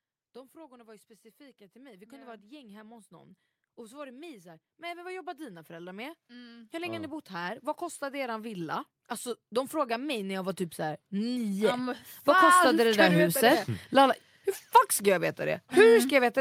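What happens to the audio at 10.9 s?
At 10.9 s the automatic gain is rising, a swell running from 9.49 to 13.25 s. The gain control judged the input too quiet and raised its level gradually by about 8 dB, so the speech and the background noise grow louder together across those seconds.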